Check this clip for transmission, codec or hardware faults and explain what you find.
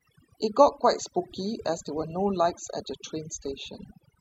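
One fault runs through the whole clip, and it comes from processing rather than from the line or the hardware: overdone noise removal. A noise reduction stage set far too aggressively has been comparing each frequency band against its estimate of the background and pulling down any band that falls close to it. Because quiet parts of the speech sit near that level, they are cut along with the noise. Between phrases the background drops, broken by small twinkling specks where isolated bands briefly rise above the threshold and slip through. A low-bitrate codec can also sound swirly, but it tends to narrow the bandwidth and smear the whole signal evenly. Here the damage follows the noise floor instead, breaking up the background in the pauses and eating the soft edges of the speech.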